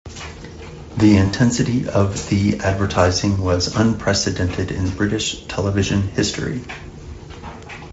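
A speech clip carried over a Speex link, with light coding roughness heard throughout. From 1.27 to 1.35 s, just before "of the advertising was", VoIP packet loss concealed by the speech codec drops 60 ms, which fits three lost 20 ms frames. The decoder extends the last pitch and filter into a buzzy tone or a coloured noise that fades away. On a spectrogram the harmonic lines go flat and dim. The waveform shows a repeating pulse train that shrinks in amplitude.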